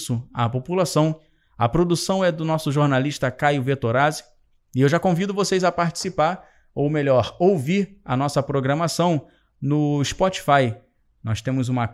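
No technical faults are audible.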